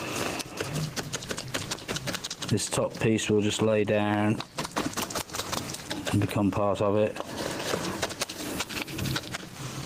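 All the way through there's gain pumping: the level gets yanked down by around 15 dB whenever something loud comes in, so everything sounds squashed. Likely the input gain was set way too hot and a fast limiter kept clamping it.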